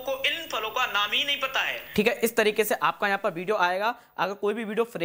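Low bit depth without dither runs from 0.0 to 3.47 s. The sound was likely truncated to very few bits, which fits about 9-bit samples, with no dither. The rounding error tracks the signal roughly 40 dB down, so quiet passages turn grainy and gritty.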